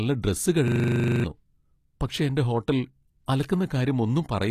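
From start to finish, the speech carries what is likely HE-AAC compression at a low rate, consistent with around 24 kbps. The treble is rebuilt from copied lower bands, so s sounds come out gritty and lispy rather than simply dull, and nothing reaches above 14.9 kHz.

From 0.68 to 1.24 s a system hang loop takes over. The machine stalled while the hardware replayed the same 40 ms buffer fourteen times, giving a rigid 25 Hz buzz and swallowing about half a second of audio. Unlike a codec glitch or dropout, the repetition is exact and regular.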